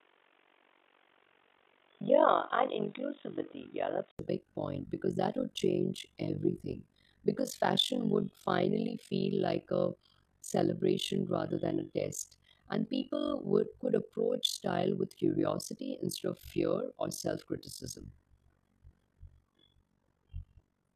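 From the start to about 4.19 s the speech is dull and boxy, with a noise floor sitting roughly 35 dB under the signal. Then comes a gap of about 80 ms, and it clears up just before "big point because that". The level stays about the same across the change. That pattern points to the input likely having been switched away from a poorer device.

Underneath the whole clip runs overlap-add ripple. The frames were put back together with an overlap that doesn't sum to a steady gain, so the level swings by about 60 dB around 50 times a second. The result is a fast, rough flutter.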